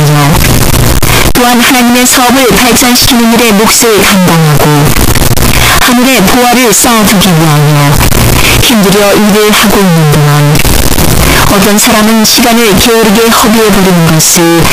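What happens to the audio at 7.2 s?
At 7.2 s the speech has the float-read-as-integer fault, present throughout: harsh, near-square, very loud, noise as loud as speech, likely 32-bit float samples read as 32-bit integers.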